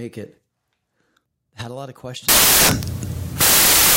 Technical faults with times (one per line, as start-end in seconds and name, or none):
2.29-3.96 samples built from the wrong bytes